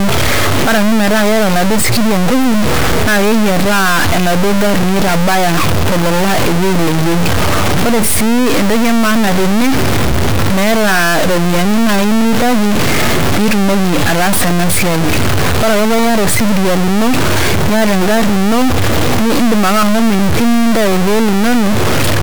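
A stuck bit runs through the whole of this speech recording, most likely from a data line or converter bit held fixed. Roughly half the samples jump by a step of about -5 dBFS, a high bit, giving harsh, buzzy distortion, and pauses fill with loud noise as small values cross zero.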